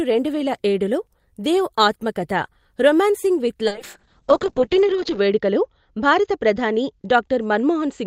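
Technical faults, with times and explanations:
3.7 s to the end (8.07 s), call bitrate drop: right after "దేవ్ ఆత్మకథ రొమాన్సింగ్ విత్" the call's bandwidth estimate collapses and the encoder is told to spend far fewer bits, consistent with a fall from around 32 kbps to about 6 kbps. With so little data, the codec quantizes coarsely, making the speech rough and watery, and it narrows the audio band from 20 kHz to 8 kHz, so the top end goes muffled. It is at its worst for about 1.5 s.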